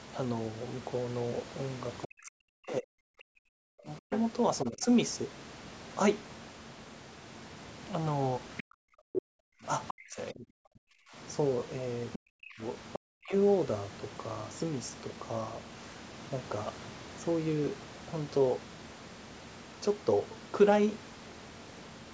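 From 2.06 to 4.89 s, 8.62 to 11.16 s and 12.17 to 13.34 s, the speech is suppressed in double talk. The voice sinks by as much as about 40 dB, dulls or breaks into pieces, likely because the echo canceller was turning down the near talker along with the loudspeaker echo. It differs from a dropout because the gaps follow overlapping talk. Meanwhile the other side's voice leaks through at 4.11 to 4.2 s, 8.57 to 9.22 s, 9.88 to 9.93 s and 12.13 to 12.99 s. It is a separate second voice, about 5 to 10 dB below the speech, and was likely residual echo the canceller missed. Unlike the suppression, it adds sound rather than removing it.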